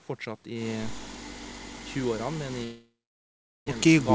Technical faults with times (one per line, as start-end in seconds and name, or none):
2.64-3.70 long network dropout